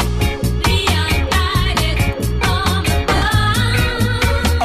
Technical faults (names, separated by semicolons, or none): lost LE Audio frames